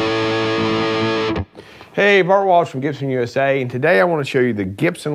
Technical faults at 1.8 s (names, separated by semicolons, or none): none